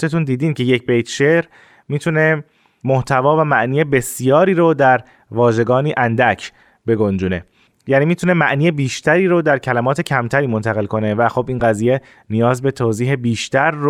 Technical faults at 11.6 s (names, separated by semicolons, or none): lost LE Audio frames